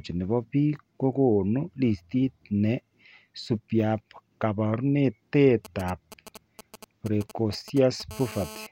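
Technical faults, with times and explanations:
5.65 to 8.02 s, GSM signalling bursts: a 2G phone close to the recording chain is sending short groups of radio bursts while signalling, not yet carrying a call. Some stage in the audio circuit rectifies those pulses and turns them into audio, so a galloping dit-dit-dit of brief 217 Hz buzzes sits under the speech, roughly 15 dB below it, with no relation to what is being said.
8.11 to 8.67 s, GSM phone buzz: a 2G phone nearby now transmits in bursts in call mode, pulsing 217 times a second. The audio circuit rectifies each radio burst, so the bursts become a steady, hard, raspy buzz at 217 Hz with a dense stack of harmonics, about 17 dB below the speech. It stays nearly steady because the phone keeps pulsing at that rate during a call.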